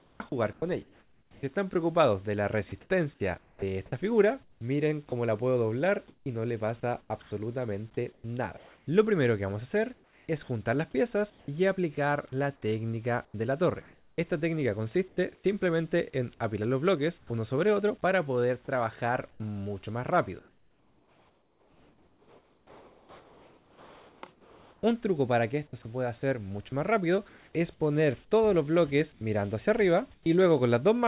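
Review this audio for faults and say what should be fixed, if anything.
From 0.00 to 11.48 s, 19.31 to 27.53 s and 29.12 to 30.26 s the sound is choppy, with quiet edges dropping out and the background flickering between real and hissy fill. Roughly 2.8 s, 4.8 s and 0.21 s are lost respectively. This is sound chopped by the voice detector, likely because the sender's detector kept toggling transmission and the receiver inserted comfort noise.

Between 13.25 and 15.44 s, about 0.63 s of the background turns into a flat, featureless hiss. A 0.12 s stretch at 17.18 to 17.30 s does the same, dropping about 8 dB against a background already about 36 dB below the loud parts. This is comfort noise in place of the background, likely generated by the receiver while the sender paused transmission in silence.

At 13.31 to 13.34 s a sound begins abruptly, its first 30 ms missing and covered by synthetic hiss. 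This is an onset clipped by the voice detector, likely because the detector reacted late when sound resumed. The narrowband call path, with nothing above 4 kHz, is consistent with G.711.

To prevent all three, disable discontinuous transmission on the sender, or lower its detector threshold and lengthen its hangover and look-ahead.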